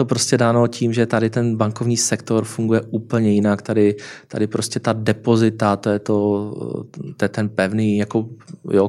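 No technical faults turn up anywhere in this speech recording, so there's nothing here to walk through in time order.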